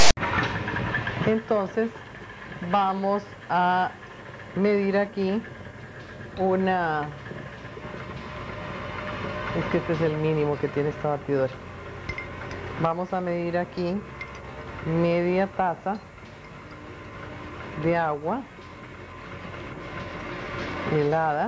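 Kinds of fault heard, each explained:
File tags played as audio: Text metadata at the head of the file is being read as if it were sound samples. The clip opens with a harsh, loud rasp pushed to one side, then brief dead silence from padding, all ending abruptly by 0.17 s.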